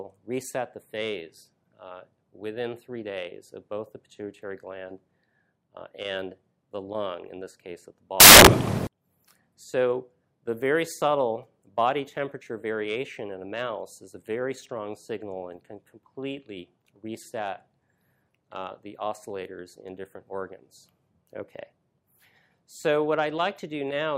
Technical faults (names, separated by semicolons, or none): samples built from the wrong bytes